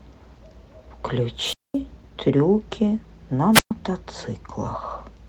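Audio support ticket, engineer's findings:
Wireless mic squelch dropout at 1.40 to 1.77 s and 3.53 to 3.71 s: brief static swell, then a hole, about 216 ms and 123 ms of muting. RF fade at the receiver, squelch gating the output until signal recovers. Check antenna placement and transmitter battery. Opus path at 24 kbps hybrid sounds fine.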